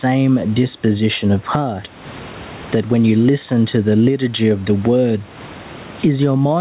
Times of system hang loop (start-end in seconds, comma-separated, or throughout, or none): none